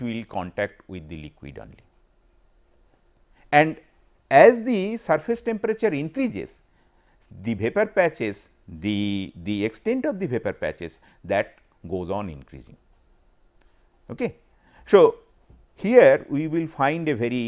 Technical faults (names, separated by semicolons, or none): none